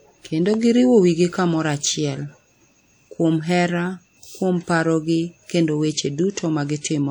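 Throughout the speech, a low-bitrate transform codec, likely WMA compression at a rate that fits around 48 kbps, smears quantisation noise across tens of milliseconds and zeroes weak spectral detail. This gives a plainly audible ringing, washy sound with hiss that breathes with the signal.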